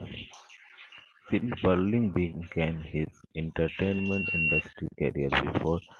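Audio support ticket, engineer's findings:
Acoustic loop: mic picking up its own loudspeaker, loop gain above one at 2.7 kHz. Loudspeaker feedback squeal 3.63–4.63 s, just after "began his"; single tone swelling over roughly a second to about 5 dB above speech.

Packet loss recovered by Opus in-band FEC: lost packet rebuilt from error correction, 3.77–3.99 s, inside the squeal. About 120 ms replaced by low-bitrate copies, consistent with six 20 ms packets. No gap; coarser, noisier texture.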